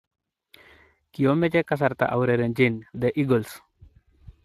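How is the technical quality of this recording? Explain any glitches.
The recording carries plainly audible Speex codec damage across the whole speech clip. From start to end, the CELP coder spends few bits on the excitation, so the speech sounds noisy and hoarse, which fits a bitrate around 22 kbps. A spectrogram shows smeared harmonics, grainy, noise-like texture in the upper band, and nothing above 15.3 kHz.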